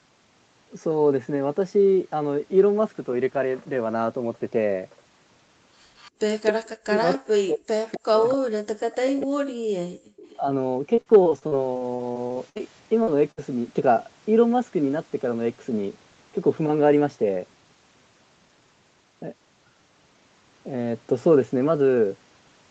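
Speech, carried over a call whose Opus link stops at about 8 kHz, with several faults. An echo leak, likely from a far-end loudspeaker whose echo canceller let part of its microphone pickup through, sends back a copy of the sound delayed by 256 ms at 5.96, 6.45, 7.11, 7.92, 8.29 and 10.16 s. These scraps range from faint to, at 6.45 s, nearly as loud as the speech itself. From 6.78 to 9.48 s the speech is suppressed in double talk. With both sides active at once, the canceller likely cannot tell the local talker from loudspeaker echo and turns everything down, so for roughly two seconds in total the speech dips, thins and breaks up, falling by about 40 dB at its deepest. Between 9.89 and 10.16 s the background is gated by the echo canceller. The canceller clamps the microphone hard while the loudspeaker plays, and the room sound drops out by about 36 dB for roughly a third of a second before returning. 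Repeated packet loss from 10.95 to 12.61 s leaves 15 holes, the longest 59 ms, adding up to about 420 ms. Each hole is patched by extending the previous sound, so about a quarter of that stretch is synthetic and the result sounds choppy and robotic. A short concealed packet loss at 13.03 to 13.09 s covers a 40 ms hole with continued sound, heard as a brief smear. A burst of packet loss at 13.31 to 13.39 s drops about 60 ms, which is filled by continuing the last sound and fading it out before the audio resumes past the missing section.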